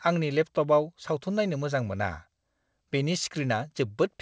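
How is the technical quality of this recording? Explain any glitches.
No glitches to report here: the speech arrives as a normal call would, with nothing above about 8 kHz, which fits a wideband call codec, and no dropouts, clicks or other faults anywhere in the clip.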